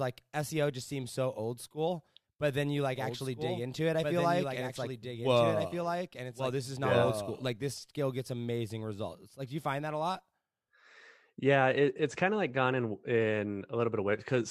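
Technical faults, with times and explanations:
2.96–7.46 s, doubled audio track: between "school but then you" and "this skill gets amazing", a full-band copy trails about 1.5 s behind, roughly 5 dB quieter and undecayed, likely from a second capture path. Spectrograms repeat each pattern 1.5 s later; the waveform's overlay starts and stops abruptly.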